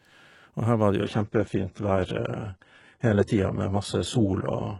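From 1.0 s to the end, the speech drops to a lower-bitrate stream: treble vanishes above about 11.1 kHz and turns thin and synthetic, with no gap at the switch.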